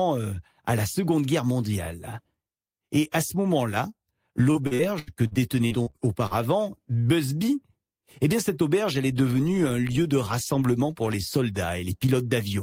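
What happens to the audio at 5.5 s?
At 5.5 s the speech is inside a stretch of repeated packet loss (robotic sound), 4.51 to 6.34 s. Short gaps up to 79 ms are patched by extending the preceding sound, leaving choppy sound with pieces missing.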